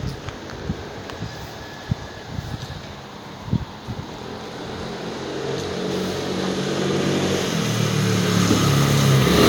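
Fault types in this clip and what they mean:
No audible faults detected.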